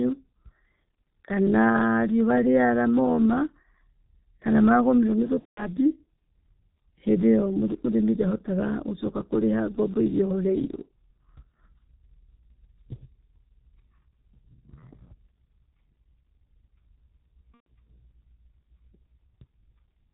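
The whole recording passes through the G.723.1 codec, and the damage is heavy. Nothing above 4 kHz survives. The speech sounds muffled and hoarse. Consonants smear together. The codec sends a coarse voice model once every 30 ms frame, so fast changes get averaged away. The thin, rough texture fits its 6.3 kbit/s mode.

At 5.39 s comes VoIP packet loss concealed by the speech codec. About 180 ms of audio is missing, up to 5.76 s. That gap matches six 30 ms frames. The decoder repeats its last pitch and filter settings and lowers the gain each frame. The speech stretches into a buzzy tone or coloured noise that fades. A second, shorter loss runs from 17.54 to 17.67 s, about 120 ms. It has the same fading stretch. After each gap the voice stays weak or distorted for a moment. This happens because each new frame is rebuilt from the damaged one before it.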